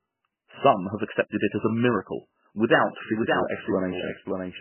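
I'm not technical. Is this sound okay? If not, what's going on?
No. The whole speech clip sounds muffled and watery, with a swirly, metallic quality, and there is nothing above about 3 kHz, so the crisp top end is gone. This is MP3 compression, and the likely cause is that the file was squeezed very hard to make it small. The encoder keeps only what it judges most important, drops weaker details so they flicker in and out, and cuts off the treble entirely.

From 2.70 s, just after "as a miracle", until the end, you hear the speech twice, as if an echo were following it. This is a doubled audio track: a second, somewhat quieter copy of the same sound, running roughly half a second behind. It likely comes from the sound being recorded a second time through a slower route, or from an edit that left two copies out of step. Unlike a room echo, it doesn't fade away. It cuts in abruptly.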